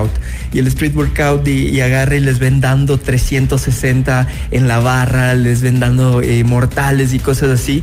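No audible faults anywhere in the audio.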